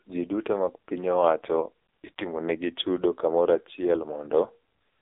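Throughout, the speech carries heavy AMR narrowband mobile codec damage, buzzy and synthetic, consistent with a low mode near 5.9 kbps. A spectrogram shows energy confined to roughly 300 Hz–3.7 kHz, with nothing above 3.8 kHz and smeared, blocky harmonics.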